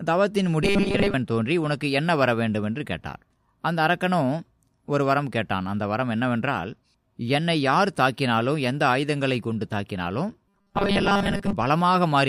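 From 0.63 to 1.14 s and 10.48 to 11.53 s, robotic sound from repeated short buffers turns the speech into a rigid metallic buzz fixed at 200 Hz, likely a 5 ms buffer looping over most of the audio. Unlike pitch shifting, the buzz ignores the voice's own pitch.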